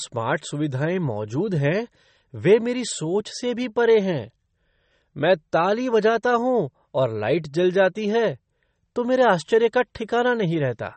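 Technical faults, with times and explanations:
Throughout, MP3 compression: the speech was likely squeezed by an MP3 encoder starved of bits, consistent with about 32 kbps, so nothing survives above 8.4 kHz and weak frequency lines flicker between frames, leaving dull, watery, swirling sibilants and smeared consonant attacks.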